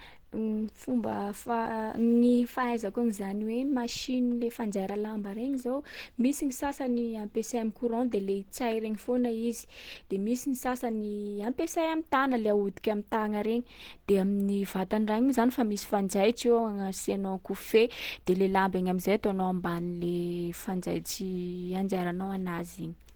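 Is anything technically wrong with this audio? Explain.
Yes. Throughout the clip, Opus compression damage is plainly audible, likely from a low bitrate around 16 kbps. In hybrid mode the encoder codes the lower range closely and fills the upper bands with shaped noise. Speech therefore sounds hoarse and grainy. A spectrogram shows harmonics dissolving into smeared, noise-like texture above the low band.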